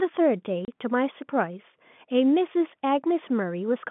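Speech carried on a telephone line band of roughly 150 Hz to 3.5 kHz is broken by packet loss filled with silence from 0.65 to 0.68 s. A 30 ms gap with hard edges fits three lost 10 ms packets. Concealment would instead smear or repeat the sound.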